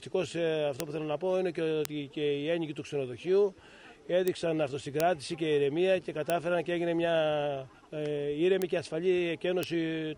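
Sharp ticks at 0.80, 1.85, 4.28, 5.00, 6.30, 8.62 and 9.63 s are bit error spikes. A flipped bit throws a sample or a few adjacent samples off by a power of two before they snap back. Each peaks at about -10 dBFS, or about -16 dBFS at 4.28 s, giving a broadband click unrelated to the surrounding sound.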